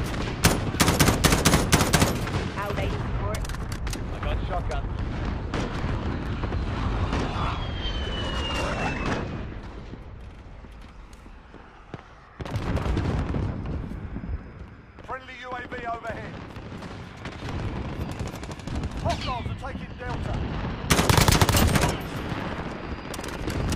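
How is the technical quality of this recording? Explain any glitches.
No glitches turn up anywhere in this recording, so there's nothing here that needs explaining.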